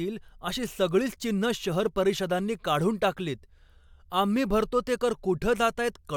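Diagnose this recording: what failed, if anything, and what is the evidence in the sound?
Nothing in this speech recording points to a failure at any stage from capture through to playback. No moment in the sound gives audible evidence of a fault.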